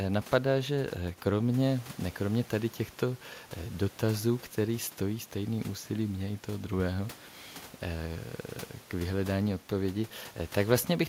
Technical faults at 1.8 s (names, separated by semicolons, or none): none